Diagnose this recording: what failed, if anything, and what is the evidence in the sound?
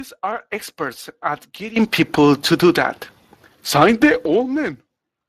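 The speech has a plainly audible hoarse, grainy texture from start to finish, and its upper band sounds like shaped noise rather than real detail, with nothing at all above 15.3 kHz. This is a codec-stage fault, Speex coding. The CELP coder has too few bits to model the vocal excitation, so the fine voice structure becomes noisy and the high band is synthesised as a noise fill. The damage fits a bitrate around 22 kbps.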